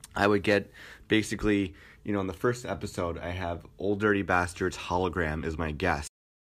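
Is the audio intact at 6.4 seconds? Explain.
No. The recording has a cut-off end: at 6.07 s the speech stops mid-sound and drops straight to digital silence, which holds through 6.4 s to the end of the file. The final buffers were never written, so the waveform halts abruptly with no natural decay or tail. What should have finished the sound is simply missing, and from 6.07 s onward the file carries only silence.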